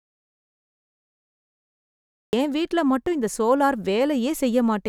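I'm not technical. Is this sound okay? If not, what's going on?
No, not quite. The clip opens in dead silence: from the very start until about 2.33 s there's nothing at all, not even the faint background hum a room normally has. That's an audio dropout to silence. The speech then kicks in mid-flow with "என் வீட்ல மட்டும் இந்த", so whatever came before is simply gone. The likely cause is the input dropping out, like a loose connection or a mute, while the recording kept running and wrote blank audio.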